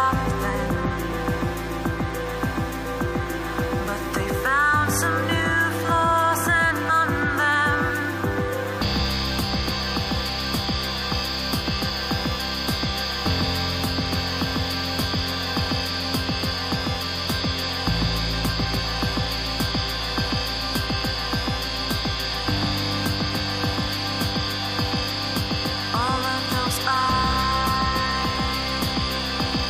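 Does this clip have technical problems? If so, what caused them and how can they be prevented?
Yes: damaged data in a compressed stream at 6.89–6.91 s and 11.11 s produces brief glitches as the decoder misreads corrupted frames and resyncs. Prevent it with error-checked transfer and storage.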